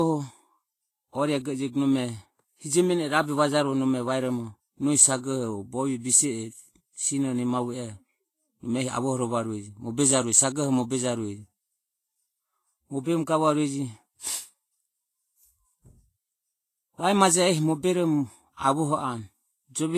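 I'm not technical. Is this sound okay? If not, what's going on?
No. Low-bitrate audio saved at a high bitrate, throughout: the speech has nothing above 14.2 kHz, likely a heavily squeezed copy re-saved larger, which cannot restore what was lost.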